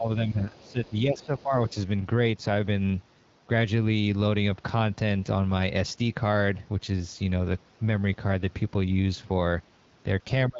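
From 0.00 to 0.79 s and again from 1.04 to 1.55 s, the speech dips by up to about 15 dB. This is likely speech suppressed in double talk: an echo canceller confused by simultaneous talk pulled down both signals. A final, deeper drop of about 25 dB clips the last tenth of a second, 10.49 to 10.59 s.

In and around these dips, a faint second voice surfaces at 0.28 to 0.32 s, 0.58 to 1.00 s, 1.17 to 1.41 s and 1.65 to 1.74 s. It sits roughly 25 to 40 dB below the speech. This is the other side's voice leaking through, likely loudspeaker pickup the echo canceller left behind.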